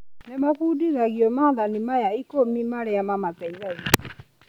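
At 3.94 s the speech hits integer overflow: a peak driven about 8 dB past full scale wraps to the opposite sign instead of being limited, giving a sharp crack. The waveform shows a sudden full-range jump; the spectrogram, a thin broadband vertical line.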